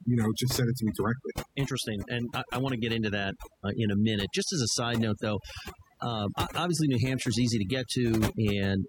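From start to finish the speech carries overdone noise removal. The denoiser was set too aggressively, switching off individual frequency bands whenever they sat near its noise estimate, so quiet speech detail is lost with the noise. The background becomes near-silent with twinkling specks.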